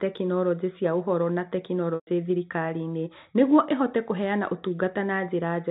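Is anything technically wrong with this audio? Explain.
Yes. Packet loss with pitch repetition occurs from 1.95 to 2.07 s, a gap of 120 ms, which fits several consecutive packets lost in transmission. The receiver bridged the hole by repeating the last pitch period of the speech and fading that copy out over about 50 ms. Because the gap is longer than the fade, the held, buzzy tone dies into silence before the speech returns through a short cross-fade. The narrow G.711 telephone band is heard throughout.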